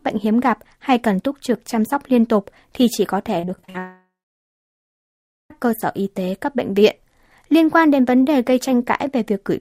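From 3.39 to 3.76 s, repeated packet loss (robotic sound) sets in. Audio keeps failing to arrive in short bursts, and each hole is bridged by stretching the last sound. About half a dozen gaps, the longest around 43 ms, cover nearly half that stretch, making it choppy.

Right after, at 3.78 s, comes what is likely a long network dropout, with nothing reaching the receiver until 5.52 s. The last sound is drawn out into a brief fading buzz or hiss, then roughly 1.4 s of silence follows before the audio resumes with the missing section gone.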